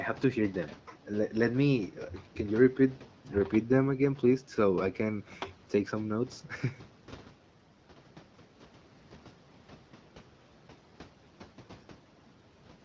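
No faults turn up anywhere in this speech recording. It carries the sound of a call's microphone processing and the AMR wideband (HD Voice) codec, with nothing present above 8 kHz and only light coding texture from the codec, which fits a rate around 12.65 kbit/s.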